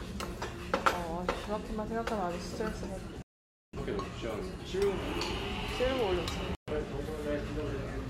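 At 3.22 s the sound mutes for about 0.56 s, then again from 6.55 to 6.72 s: a digital broadcast dropout, where the receiver stopped getting valid frames and went silent until good ones arrived. Both show as flat waveform gaps and blank spectrogram columns.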